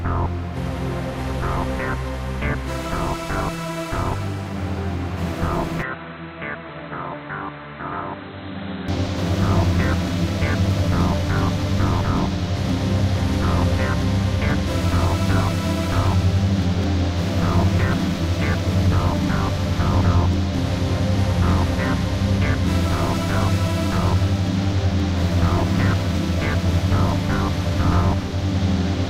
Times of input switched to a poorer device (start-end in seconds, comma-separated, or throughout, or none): 5.82-8.88